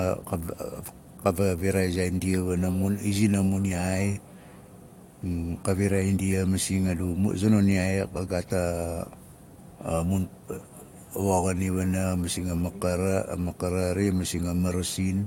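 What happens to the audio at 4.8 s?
Nothing goes wrong at 4.8 s; the speech carries on intact through that moment, with no dropout, click or other audible fault.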